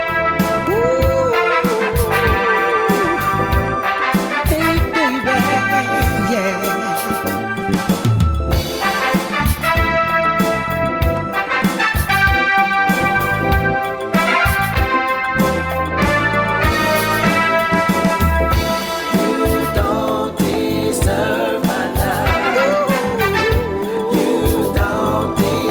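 Nothing technical stands out here; there's no dropout, glitch or distortion to point to anywhere in the audio.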